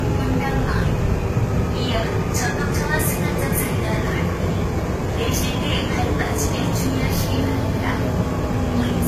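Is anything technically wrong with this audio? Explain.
Yes. Transcoding between lossy codecs runs through the whole clip. Nothing reaches above 14.9 kHz, and two layers of compression damage sit on top of each other. The likely cause is a very low-bitrate encode, consistent with HE-AAC at around 20 kbit/s, later re-encoded to Vorbis at around 48 kbit/s. The second encoder spends its bits reproducing the first one's artefacts, then adds its own, so both are heard together.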